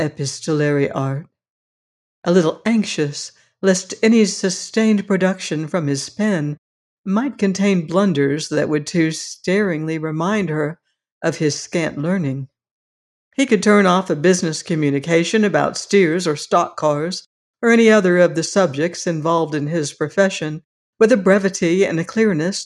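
Nothing here calls for comment: listening all the way along, there's no glitch, dropout or odd artefact to point to at any moment.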